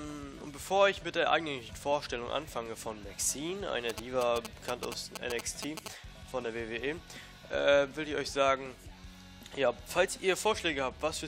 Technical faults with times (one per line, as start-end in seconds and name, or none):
3.89-5.88 GSM signalling bursts